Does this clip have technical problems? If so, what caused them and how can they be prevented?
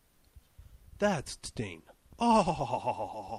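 Yes. A skip ahead at 1.45 to 1.47 s jumps playback forward with no gap filled in. Around 0.7 s of sound was discarded, either lost in transit or dropped by an overflowing jitter buffer, and the two sides are joined almost directly. Sizing the jitter buffer adaptively, so that bursts of late packets are absorbed rather than forcing a discard, would prevent it.

A jitter buffer speed-up from 1.69 to 2.51 s makes the sound run about 6% faster at an unchanged pitch. The buffer held more than its target, and the receiver trimmed short pitch-period slices repeatedly, removing roughly 50 ms in total. Gentler, slower delay reduction and more stable network timing would avoid the hurried stretch.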